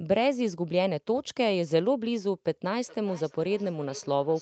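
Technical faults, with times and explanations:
2.87 s to the end, feedback echo between two devices: the speech starts coming back at a regular delay of roughly 400 ms, thin and ringing, at about 19 dB below the direct sound. A second device in the room is playing the call aloud, and this microphone picks that playback up and sends it back. Its echo canceller only subtracts its own device's output, so the other device's sound loops through unremoved, band-limited like the rest of the 8 kHz call audio.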